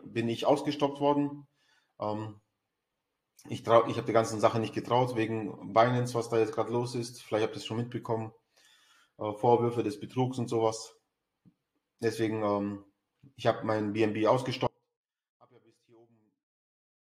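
At 14.67 s the audio drops out to a faint residue, and it stays that way to the end. The change is abrupt. It is not a pause or a fade. Only a faint leak of the sound remains, roughly 35 dB below its normal level. The path after the break still sounds live, so the wanted signal was likely lost upstream while the later stages kept passing what little reached them.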